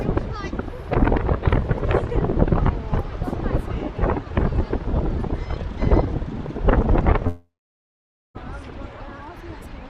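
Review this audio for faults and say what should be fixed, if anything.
From 7.27 to 8.38 s the sound trails off as a fading continuation of the last sound, then about 0.86 s of near silence, and resumes with roughly 1.1 s gone, likely a long network dropout. Unlike a brief packet-loss glitch, concealment runs out and the lost stretch never returns. A more stable network link with forward error correction or redundant packets would prevent it.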